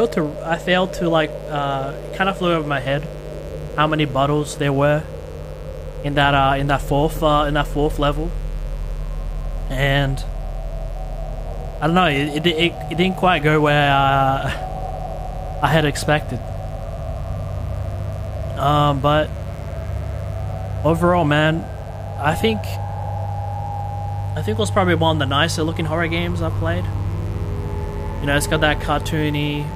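A mains buzz runs from start to finish. It sits roughly 15 dB below the wanted sound. Its base is 50 Hz mains. Sharp switching spikes are getting into the signal path twice in each mains cycle. A dimmer, a rectifier or a missing shield would let them in. Those spikes produce harmonics of 50 Hz reaching up to several kHz. The result is a steady, raspy buzz under everything.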